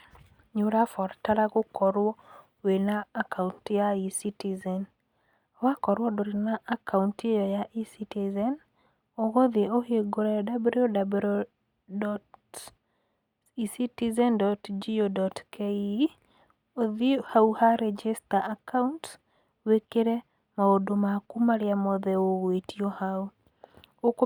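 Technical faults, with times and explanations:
No technical faults can be heard anywhere in the speech recording, and the signal stays intact and steady throughout.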